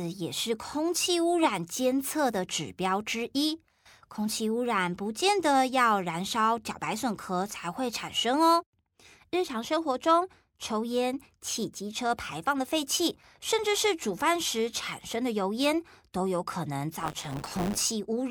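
From 16.99 s to 17.80 s the speech takes on a robotic buzz at 100 Hz, the signature of buffer tearing. The writing side and the reading side of the playback ring buffer have drifted until they cross inside each period, so roughly a tenth of every buffer carries audio from about 20 ms earlier, with hard joins on both sides. Those joins repeat once per period, which points to a period of about 10 ms.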